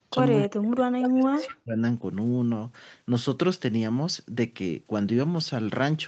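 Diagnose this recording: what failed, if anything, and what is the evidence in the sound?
The trouble sits in call processing, on the echo canceller side. The speech gets pushed down hard from 0.01 to 0.15 s and again from 0.44 to 1.78 s, sinking close to silence at its deepest, roughly 40 dB under. That's speech suppressed in double talk, most likely: with both ends active, the canceller couldn't tell this talker from the loudspeaker echo and clamped everything.

There's also an echo leak, heard as two short scraps at 1.03 s and 1.42 s, each a copy of the voice arriving about 202 ms late, roughly 10 dB and then 15 dB below the direct speech. It's likely the far end's canceller on a loudspeaker phone missing part of what its mic caught and sending it back through the Opus path, which tops out at 8 kHz.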